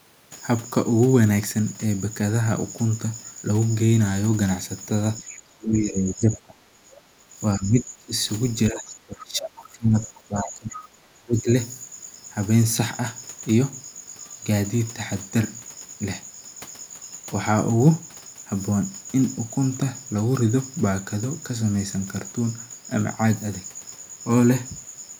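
From 5.19 to 7.36 s the speech sinks by up to about 20 dB, most likely speech suppressed in double talk: with both ends active, the echo canceller cannot tell the near talker from loudspeaker echo and attenuates everything. Further dips follow at 7.58 to 8.11 s (up to about 15 dB) and 8.71 to 11.49 s (about 20 dB). The waveform envelope visibly collapses in these stretches, and the spectrogram shows the upper harmonics thinning or breaking into gaps while the lower bands persist faintly.

Inside those dips, brief scraps of the other side's voice leaking through appear at 5.34 to 5.39 s (about 30 dB below the speech), 9.21 to 9.25 s (about 25 dB down) and 10.72 to 10.89 s, the longest and loudest at about 15 dB down. These are likely residual echo that the canceller failed to remove from the microphone signal. On a spectrogram they show up as small, isolated harmonic patches sitting in the suppressed regions. 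On the waveform they form tiny bursts within the flattened envelope.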